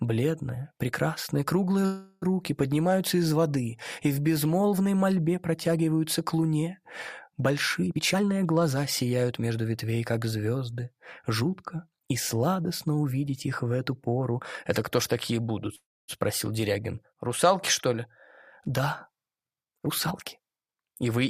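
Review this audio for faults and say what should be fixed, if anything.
Call audio freeze at 1.85–2.24 s and 15.76–16.10 s: the sound stalls and trails off as a fading buzz or hiss, going silent for about 270 ms in the second. It then resumes where it stopped, likely because delayed packets drained the jitter buffer. Nothing is lost, but each gap adds 365 ms and 325 ms of delay. A steadier network path or a deeper jitter buffer target would prevent these stalls.

Jitter buffer speed-up at 7.87–9.65 s and 19.72–21.19 s: the sound runs hurried at the same pitch, at 121% and then 118% speed. The receiver removed many short pitch-period slices, dropping roughly 0.4 s and then 0.3 s to cut the built-up delay. Gentler catch-up, spread over a longer stretch, would prevent this.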